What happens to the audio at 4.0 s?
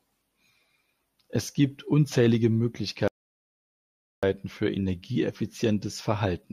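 At 4.0 s you're in the middle of a playback stall: the speech cuts out abruptly at 3.08 s and there's dead silence for about 1.15 s, until 4.23 s, when it picks up again. That's the kind of gap you get when the player runs dry of data or its output thread gets held up, so this was likely a starved buffer or a blocked thread. Nothing comes out until it catches up.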